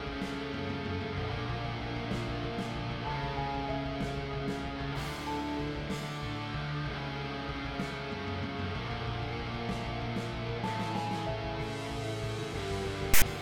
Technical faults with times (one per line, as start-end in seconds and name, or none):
13.14-13.22 file tags played as audio